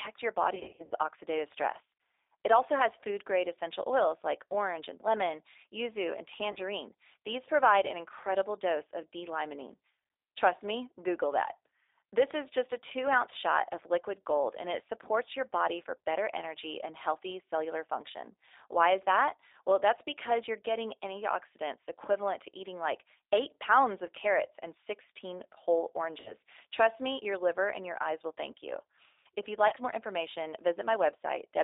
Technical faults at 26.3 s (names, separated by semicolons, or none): G.729 codec; VoIP packet loss concealed by the speech codec